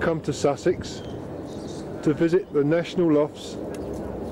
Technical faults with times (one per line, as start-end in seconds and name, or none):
none